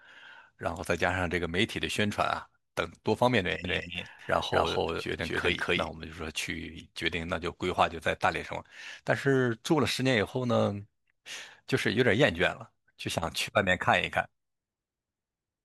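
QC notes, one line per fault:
3.64–5.89 s, doubled audio track: a second full-band copy of the speech runs about 200 ms behind the first at roughly equal level, with no decay or room colour, and cuts in and out abruptly. Likely cause: a slower second capture path or misaligned edit.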